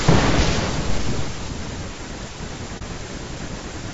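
Speech runs throughout with plainly audible low-delay AAC compression: voiced sounds turn rough and grainy, with noise filling the gaps between harmonics and a thin, synthetic-sounding top band. It is likely AAC-ELD at a low bitrate, around 32 kbps. A spectrogram would show smeared harmonic stripes and a patchy high band. AAC frame loss with muting opens a brief, soft-edged hole from 2.78 to 2.83 s. The sound fades out and back in, which fits a single lost frame of about 30 ms being zeroed. The waveform shows a short tapered dip, and the spectrogram shows a narrow faded column across all frequencies.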